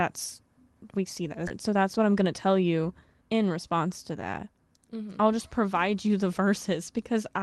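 A speech clip carried over a WebRTC-style call path, where the Opus-type coding limits the audio bandwidth to about 12 kHz. At 1.47 s there is a skip ahead: about seven tenths of a second of speech is missing, and the audio on either side is butted together with no filler and no audible gap. This happens when a stretch of packets is lost in transit or thrown away by an overfull jitter buffer while newer audio is already queued, so playback simply resumes from the later material. Straight after, from 1.56 s to 2.64 s, a jitter buffer speed-up follows. Speech runs about 11 percent fast at unchanged pitch and sounds hurried. The receiver is trimming short pitch-period-sized slices again and again, roughly 150 ms in total, to drain the excess delay that built up in the buffer.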